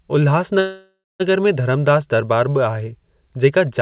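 A call audio freeze runs from 0.6 to 1.22 s. The speech stalls and the last sound is stretched into a fading buzz that sinks to silence for about 0.2 s before the speech resumes exactly where it stopped. About 0.6 s is filled in and nothing is lost, so everything afterwards arrives that much later. The likely cause is delayed packets draining the jitter buffer. The speech is also band-limited to 4 kHz, which fits a narrowband G.711 A-law call path.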